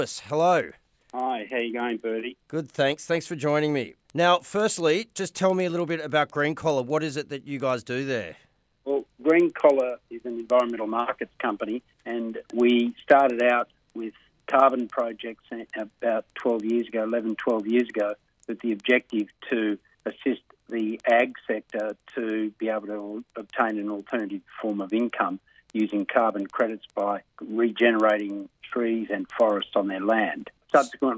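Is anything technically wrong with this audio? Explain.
Yes. Throughout the clip, the resampler restarted on every block: each 100 ms block was converted separately, likely from 48 kHz down to 16 kHz, leaving an edge error heard as regular ticks at 10 Hz whenever sound is present.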